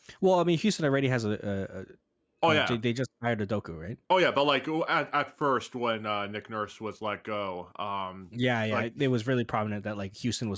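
Nothing stood out on listening to this speech recording.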